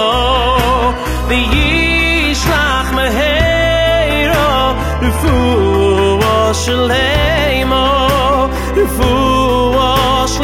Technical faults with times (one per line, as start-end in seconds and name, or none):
0.00-6.00 adaptive stream starting at a low bitrate